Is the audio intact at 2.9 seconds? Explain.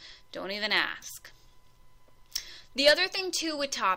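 Yes, at 2.9 seconds the audio is intact, with no dropout, click, distortion or other fault at that moment.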